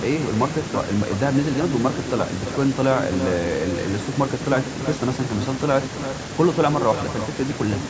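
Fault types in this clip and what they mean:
Echo with no canceller: the far end's microphone picks up its loudspeaker and nothing cancels it, so the speech returns over the network. Throughout, every phrase is shadowed roughly a third of a second later by a thinner copy about 9 dB quieter.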